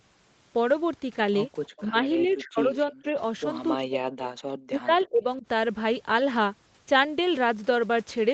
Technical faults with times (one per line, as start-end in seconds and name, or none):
1.64-1.83 echo leak
1.88-1.95 speech suppressed in double talk
2.20-3.06 speech suppressed in double talk
3.75-4.28 speech suppressed in double talk
4.66-5.45 speech suppressed in double talk